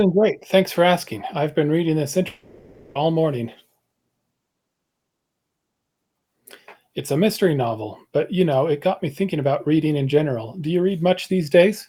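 Right after "I've been reading this", at about 2.27 s, the speech cuts out until roughly 2.97 s. It sounds like a long network dropout: for about 0.7 s the last sound is stretched into a fading buzz, and the speech resumes with that stretch likely lost in transit.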